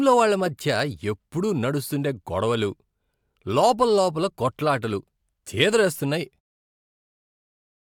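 No technical faults are audible.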